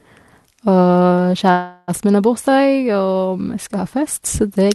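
At 1.51 s the speech stalls into a buzzy, fading continuation of the last sound for roughly 0.36 s, then resumes at 1.91 s with "min har" and nothing lost. It's a call audio freeze, likely from delayed packets draining the jitter buffer, with the whole stream now running late.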